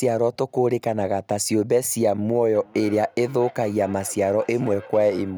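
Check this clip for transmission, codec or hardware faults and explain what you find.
There is one fault, a feedback echo between two devices, from 2.55 s to the end. A second device in the room replays the call and this microphone picks it up again, beyond reach of its own echo canceller. The speech returns roughly every 0.4 s, peaking about 21 dB below the direct sound.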